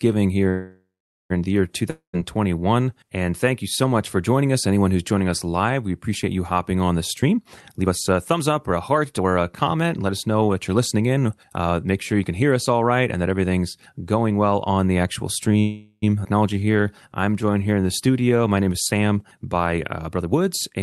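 Speech heard through a call codec, with the top end stopping near 12 kHz, and carrying several jitter-buffer faults. A call audio freeze runs from 0.49 to 1.32 s: the last sound is stretched into a fading buzz and then about 0.45 s of silence before the speech resumes where it left off, likely because packets were held up and the buffer ran dry, inserting roughly 0.81 s of delay. A second call audio freeze follows "well on the actual" from 15.60 to 16.04 s, adding about 0.43 s of the same decaying fill and little true silence. A long network dropout comes just after "here in the year", from 1.90 to 2.15 s. The sound decays into a short silence, and when it returns about 0.24 s of speech has been skipped, likely because that audio never arrived. Jitter buffer speed-up appears three times. A brief burst from 7.23 to 7.39 s runs at 152% speed, trimming roughly 70 ms. A long stretch from 7.79 to 12.43 s, ending just before "us all right and", runs at 115% and cuts about 0.7 s. 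Another, from 19.69 to 20.81 s, runs at 115% and removes about 0.2 s. In each, the buffer discards short pitch-period slices, so the speech sounds hurried at unchanged pitch. A jitter buffer slow-down from 16.53 to 18.42 s works the other way, repeating pitch periods and bits of pause to add 247 ms. Speech there plays at 87% speed, drawn out but at the same pitch.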